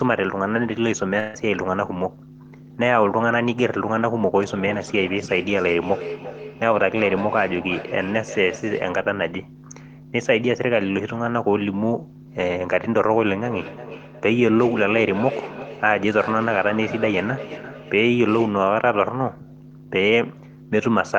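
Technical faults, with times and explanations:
1.19 to 1.36 s: burst of packet loss. A run of packets went missing, and about 140 ms of speech never arrived. The receiver covered the gap with roughly 143 ms of synthesised continuation, extending the last sound and letting it decay, so the last sound is briefly held and fades rather than dropping to silence. When real audio resumes it has jumped ahead, and the section that should have filled the gap is simply absent.
4.39 to 9.01 s and 13.45 to 18.71 s: feedback echo between two devices. Speech comes back at an interval of roughly 300 ms, the loudest return sitting about 12 dB below the direct speech. Two devices in the same room are both on the call, so one loudspeaker feeds the other's microphone, and neither echo canceller can remove sound it did not play itself. Each repeat circulates the loop again, returning thinner and more resonant each pass.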